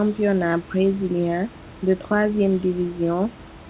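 No technical faults are audible.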